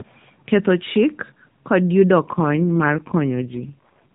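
From 2.34 s to 4.12 s there's an AMR rate drop: the codec falls from 12.2 to 4.75 kbps, so the speech turns rougher and more synthetic, though the band stays the same with no gap.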